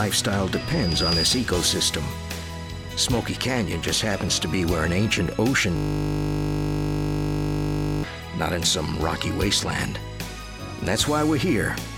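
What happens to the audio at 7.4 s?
At 7.4 s the sound is a steady 50 Hz buzz, part of a system hang loop from 5.77 to 8.04 s. The system froze while the hardware kept replaying the same 20 ms buffer, looping it exactly over a hundred times.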